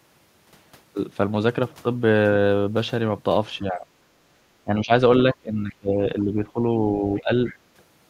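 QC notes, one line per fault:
3.59–3.86 s, 4.64–4.91 s, 5.33–6.63 s and 6.96–7.30 s, speech suppressed in double talk: the speech dips sharply, by around 15 dB and nearer 20 dB in the longest stretch. This is likely an echo canceller turning down the near talker while the far side spoke over it.
7.47–7.56 s, other side's voice leaking through: a brief, faint scrap of a second voice sits roughly 25 dB below the speech. It is likely loudspeaker sound that the echo canceller failed to strip from the microphone signal.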